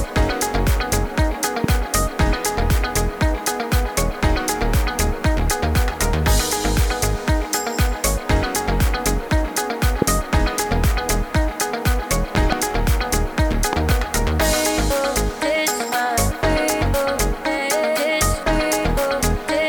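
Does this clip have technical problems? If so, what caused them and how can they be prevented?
Yes. Grainy distortion follows the sound throughout, turning quiet passages gritty, with noise roughly 30 dB below the signal. This is likely low bit depth without dither, consistent with rounding to 8 bits. Prevent it by keeping 16 or 24 bits and adding dither when reducing word length.

Sharp loud pops, about 15 to 20 dB above the sound, hit singly at 1.64–1.66 s and 10.02–10.04 s, and as pairs at 12.35–12.55 s and 13.73–13.94 s. They are likely voltage spikes from plugging, switching or static. Prevent them by securing connections and avoiding switching equipment while recording.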